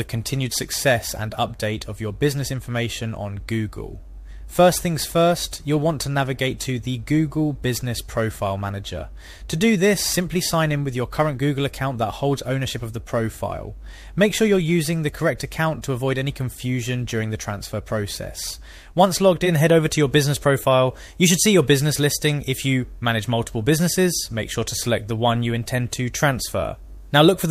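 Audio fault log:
0.00 to 19.26 s, crude rate conversion: there's a gritty, inharmonic fizz riding on the sound that swells with louder and brighter passages. It comes from the sample rate being stepped up by just repeating the nearest sample instead of filtering, and the spacing of those repeats fits a 44.1 kHz to 48 kHz change. That regular pattern throws off tones unrelated to the material, sitting only around 25 dB below it.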